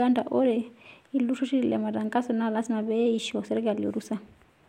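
Listening closely to the speech, nothing stood out as a technical fault at any point.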